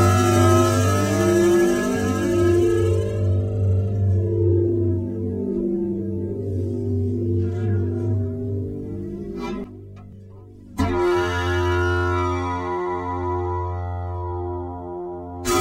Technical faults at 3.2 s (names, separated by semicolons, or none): none